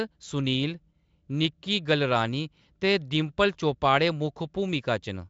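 No technical faults can be heard in the speech: it has passed through the Speex codec at a high setting, consistent with roughly 34 kbps, with at most faint coding traces and nothing above about 7.6 kHz.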